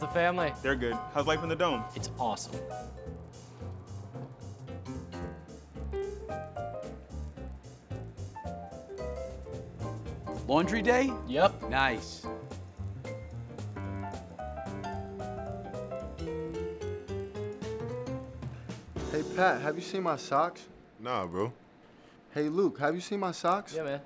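From 2.88 s to the end, a steady 25 Hz buzz of fine ticks rides on the sound wherever signal is present. This is a resampler restarted on every block: each 40 ms block was converted from 48 kHz to 16 kHz separately, leaving an error at every block edge.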